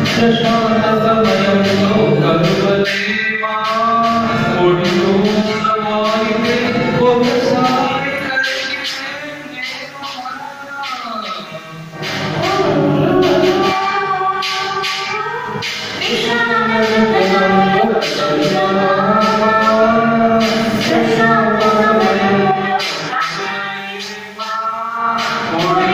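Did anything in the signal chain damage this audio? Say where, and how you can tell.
No, I can't hear any point in the chain where something went wrong, so there's nothing here to track down.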